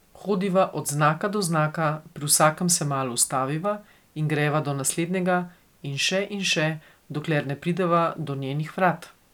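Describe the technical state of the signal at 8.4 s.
At 8.4 s the speech signal is intact, with no audible dropout, distortion, glitch or other technical fault.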